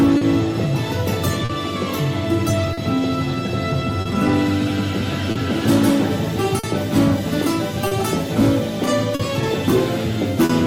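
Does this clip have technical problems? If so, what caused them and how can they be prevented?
Yes. The clip shows two kinds of fault.

Clock drift between sender and receiver: the sender's clock runs roughly 3 percent slow, so the receiver's jitter buffer keeps draining. Throughout the clip, the receiver repeats or stretches short pieces to keep playing, which causes small, unevenly spaced timing hiccups. Locking both ends to a common clock, or using adaptive resampling at the receiver, prevents this.

Scattered short gaps: between 0.17 s and 10.51 s, around ten packets were lost or arrived late. The receiver filled each hole by continuing the previous sound. Each patch is brief, the longest about 40 ms, so the sound stays clear apart from isolated ticks and smears. Forward error correction or a slightly deeper jitter buffer would prevent them.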